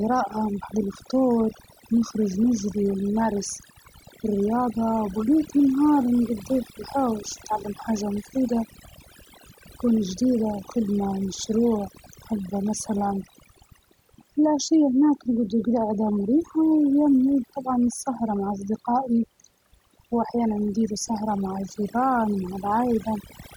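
Overdone noise removal runs throughout: over-aggressive reduction mutes any frequency band near the noise estimate, leaving near-silent gaps with twinkling specks and quiet parts of the speech stripped away with the noise.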